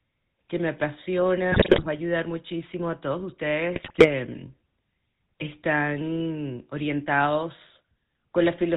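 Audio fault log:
Throughout: GSM full-rate codec. The speech has a plainly audible buzzy, gravelly roughness, consistent with a 13 kbps GSM full-rate coder rebuilding the voice from a vocal-tract model and sparse regular pulses. A spectrogram shows a hard ceiling near 4 kHz and coarse, grainy harmonics.
1.52 to 1.87 s and 3.74 to 4.11 s: GSM bit errors. Corrupted frames reach the decoder, so filter, pitch and gain values go wrong and the speech breaks into squawks, pops and gargling, harsher in the first burst. Waveform shows sudden level spikes; spectrogram shows smeared, misplaced energy blocks.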